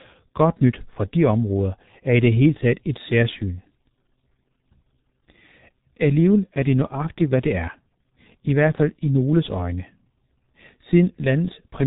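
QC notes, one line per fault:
throughout, G.723.1 codec: the speech is muffled and hoarse, with nothing above about 3.8 kHz and consonants smeared together. That heavy grit fits a very low-rate stream of around 6 kbit/s, where the slow, coarse voice model can't keep up with fast articulation.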